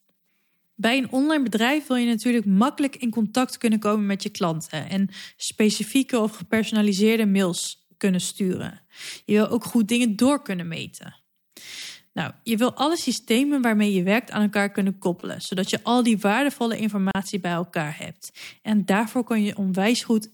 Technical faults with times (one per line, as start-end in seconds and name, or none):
14.81-15.77 GSM signalling bursts
17.11-17.15 gap at a join of encoded pieces